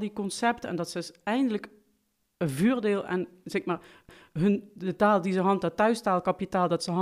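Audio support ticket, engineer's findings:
CD skip at 4.09 s in the speech: brief tick, a few ms of mute, then playback resumes elsewhere. Laser jumped tracks on the disc's spiral, knock or surface flaw.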